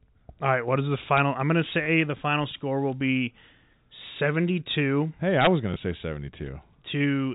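At 1.17 to 1.20 s and again at 5.41 to 5.47 s, loud peaks trigger integer overflow. Driven only about 1 dB and about 2 dB past full scale, the samples wrap to the opposite sign and crack harshly. On the waveform, peaks jump rail to rail; the spectrogram shows full-band vertical streaks.

At 1.84 to 1.86 s and 5.74 to 5.76 s, packet loss with last packet repeated fills each missing 20 ms packet with a replay of the previous one. Each repeat gives a small blip, seen as a duplicated waveform segment. Nothing appears above 4 kHz, the ceiling of the G.711 telephone band.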